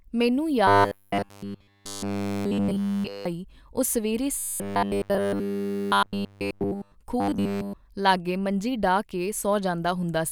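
Speech clip with a robotic sound from repeated short buffers in three stretches: 0.67 to 3.25 s, ending just before "ਉਹ ਸਵੇਰ"; 4.38 to 6.95 s, right after "ਉਹ ਸਵੇਰ"; and 7.20 to 7.73 s, just before "ਲਾਗੇ ਮੰਜੀ". Each becomes a stiff metallic 100 Hz buzz throughout, loosely tracking the talking. The likely cause is starved playback looping the last chunk of audio, which fits a repeat of about 10 ms.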